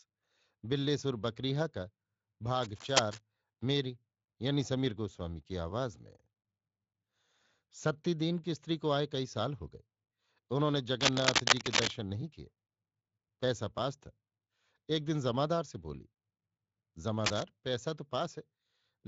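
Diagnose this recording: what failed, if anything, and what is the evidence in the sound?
Scratchy bursts near speech level at 2.62 to 3.22 s, 11.01 to 11.91 s (louder) and 17.24 to 17.43 s: cable scratch noise, likely a worn analogue connector with flickering contact resistance.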